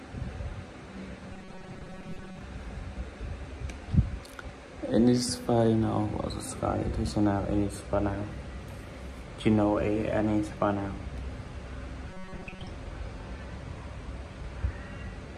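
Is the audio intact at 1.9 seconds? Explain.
No. From 1.33 to 2.41 s the sound turns into a rigid, metallic buzz at 188 Hz, the robotic sound from repeated short buffers. The likely cause is audio arriving too seldom, so roughly half this stretch is filled by repeating the last few milliseconds while real audio is skipped.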